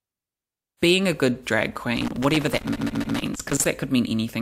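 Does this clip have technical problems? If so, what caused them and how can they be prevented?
Yes. Loose connector crackle runs from 1.97 to 3.65 s, right after "being a good drag": a worn or dirty contact kept making and breaking, chopping the signal into irregular scratchy bursts. A waveform shows ragged dropouts and spikes; a spectrogram shows scattered vertical broadband streaks. Cleaning or replacing connectors and securing cables prevents it.

Repeated frames occur from 2.72 to 3.14 s: a block of about 139.3 ms, which points to a run of three compressed frames, was played three extra times, producing a stutter and adding 418 ms. A waveform and spectrogram show the same short pattern copied side by side. Verifying writes and using sequence-checked transport prevents it.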